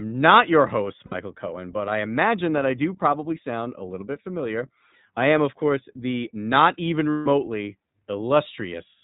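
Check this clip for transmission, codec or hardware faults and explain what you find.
Two problems show up: the whole thing runs through the iLBC codec, and there are two short dropouts where iLBC frames were lost.

The iLBC codec damage is plainly audible from start to finish. It's narrowband, so nothing above 4 kHz survives, and the speech has that slightly rough, synthetic edge you get when each frame's excitation is coded on its own. The character fits the 20 ms frame mode at around 15 kbps.

Lost iLBC frames hit right after "not your host", from about 1.06 to 1.14 s, a 60 ms gap, which fits three lost 20 ms frames. It happens again after "course the not even", from about 7.11 to 7.27 s, where 160 ms goes missing. In both places the decoder covers the hole by repeating the last pitch cycle blended with noise, so you hear a held, faintly buzzy vowel instead of the real sound. The second gap is longer and fades a bit as it goes. 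Since iLBC frames don't depend on their neighbours, the speech snaps back cleanly as soon as packets arrive again.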